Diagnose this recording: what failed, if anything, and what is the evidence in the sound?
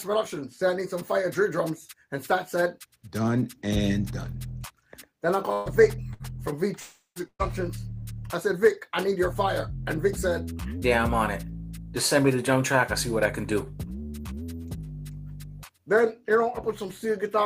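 The network is dropping packets in bursts, at 5.53 to 5.69 s, 6.14 to 6.23 s and 7.28 to 7.42 s. Each time the receiver stretches the last sound into a fading buzz or hiss for 60 to 120 ms, then jumps ahead. The third one decays into about 60 ms of silence.

From 6.80 to 7.19 s there's a longer hole: the sound is held and fades for roughly a quarter of a second, goes quiet for the last 110 ms, then resumes with about 360 ms missing. That's likely a long network dropout.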